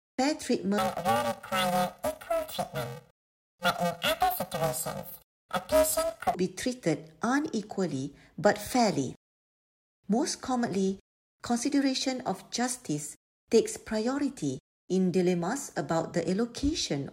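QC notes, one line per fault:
0.78–6.35 s, planar audio read as interleaved: each block of left-then-right samples is read as alternating pairs, so every block plays twice at double speed. At about 2.9 ms, which fits a 128-sample block, this gives a robotic buzz at roughly 345 Hz, with no clear octave shift.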